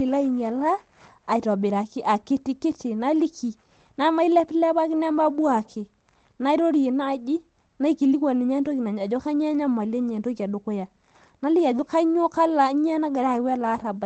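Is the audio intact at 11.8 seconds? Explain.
No. At 11.77 s there is a lost packet rebuilt from error correction, lasting about 20 ms, which fits a single lost packet. The packet that followed carried a low-bitrate copy of it (Opus in-band forward error correction), and the decoder played that copy instead. There is no gap or dropout, only a brief patch where the speech turns rougher and noisier. Unlike ordinary loss concealment, the sound isn't smeared or guessed from before. The real content continues, just coded more coarsely.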